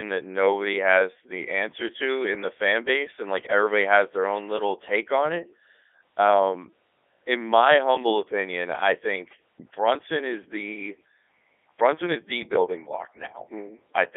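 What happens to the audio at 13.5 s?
At 13.5 s the speech is still passing through the Codec 2 vocoder, as it does for the whole clip. The waveform itself is not carried. Only pitch, voicing, energy and a rough spectral envelope survive, and the decoder rebuilds the voice from sine waves. The result is heavily damaged, robotic and buzzy. The band sits between 300 Hz and 3.5 kHz. The detail heard fits Codec 2's top 3.2 kbit/s mode.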